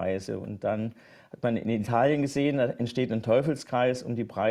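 No faults can be heard in this recording. Nothing in the audio points to a problem at any point.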